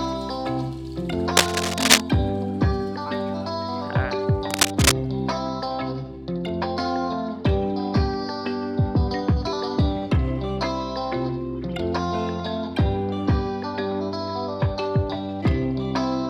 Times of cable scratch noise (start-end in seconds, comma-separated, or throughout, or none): 1.37-2.00, 4.50-4.92